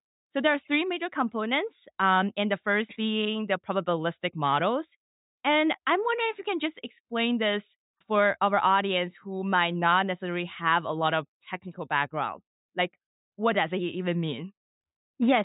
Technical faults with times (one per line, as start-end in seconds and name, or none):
none